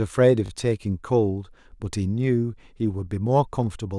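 At 0.46 s there is a repeated buffer lasting until 0.50 s. Fresh audio failed to reach the output in time. The device replayed its last block instead, twice more. Each copy is about 20 ms long, which fits a 20 ms buffer. The hard joins fall at a 50 Hz rate. The result is a brief buzzy stutter rather than distinct repeats. Little or no speech seems to be missing afterwards.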